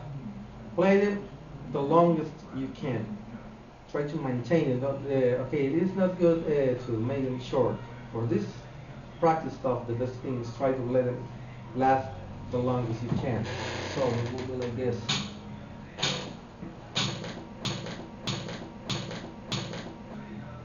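Right near the end, from about 17.65 s to 20.14 s, the audio gets stuck in a broken-record loop: a fragment of roughly 623 ms plays, then plays again, exactly the same, four times back to back with no gap. It's the stutter of something that stalled and kept pushing out the last piece it had buffered, most likely the player, encoder or stream, and whatever should have been heard in those two and a half seconds is simply gone.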